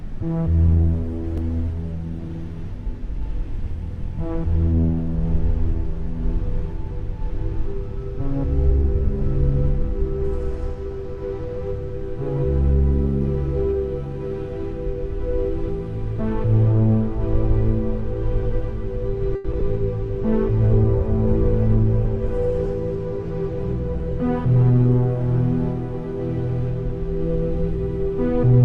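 From 0.6 to 4.61 s there is a call bitrate drop: the encoder's budget falls from 96 kbps to about 17 kbps and stays at its lowest for 1.69 s. Coarser coding makes the sound grainy and watery, and the top end is shaved off so it turns muffled. What separates this from a network glitch is duration: it is a sustained change in texture over several seconds, not a momentary break.

At 19.35 to 19.46 s comes a short stall from a late packet. A packet arrived about 90 ms behind schedule, the jitter buffer ran dry, and the receiver stretched the last sound across that 90 ms before picking up exactly where it left off. Nothing is lost, so the sound is held unnaturally long with a faint buzz or dip, then continues intact.

Right after, at 19.52 to 19.55 s and 19.59 to 19.62 s, there are two instances of short concealed packet loss. These differ from the stall because audio really is gone, about 20 ms and then 40 ms. 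Each gap is patched with a brief extrapolation and blended back, heard as a small smear or wobble. The second one also comes as the buffer sheds some of the earlier delay, roughly 30 ms.

From 20.09 to 25.07 s a second call bitrate drop takes the rate from 96 kbps to about 18 kbps, sitting at the floor for almost the entire stretch. The same rough, dulled, band-limited quality returns and lasts about five seconds before clarity comes back.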